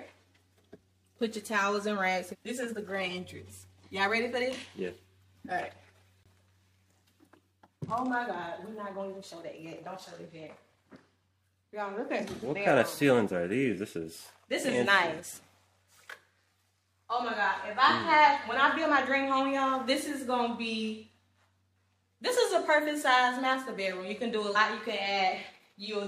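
At 24.55 to 24.57 s, compressed frames are skipped: the decoder never plays a short run of frames, so the audio leaps ahead by about 50 ms.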